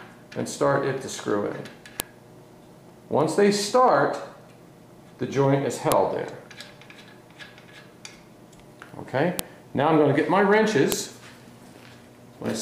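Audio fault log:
2.00 s, 5.92 s, 9.39 s, 10.92 s: file header played as audio. Each time a new segment begins, a sharp, loud click or snap cuts in regardless of the surrounding sound, because the segment's WAV header bytes were decoded as samples. On the waveform each appears as a brief spike. On the spectrogram it shows as a thin vertical stripe spanning the whole frequency range, lasting about a millisecond or less.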